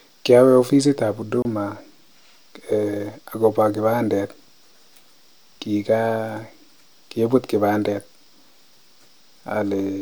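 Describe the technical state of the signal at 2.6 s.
At 2.6 s the speech signal is intact, with no audible technical fault at that moment.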